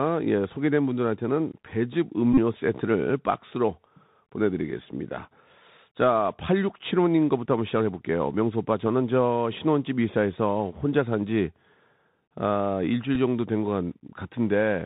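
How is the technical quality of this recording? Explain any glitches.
The recording quality is poor. It is narrowband speech over a Bluetooth headset link, with two brief dropouts.

Bluetooth CVSD headset codec damage runs through the whole clip. The sound fits a 64 kbps CVSD link. Each sample is coded as a single step up or down, and the step size adapts. Nothing above 4 kHz gets through, so the speech sounds muffled. Loud, bright sounds outrun the step and distort. S sounds turn scratchy. A grainy hiss sits under everything.

A Bluetooth headset packet repeated fault hits from 2.33 to 2.39 s. Packets were lost, and the chip replayed the last good packet in their place. About 41 ms of audio is missing, scattered across roughly 45 ms, which points to around eleven lost packets. The longest unbroken run is about 30 ms. There the repeat every 3.75 ms forms a short buzz near 267 Hz. A second, smaller repeat at 13.15 s loses two packets, about 7.5 ms.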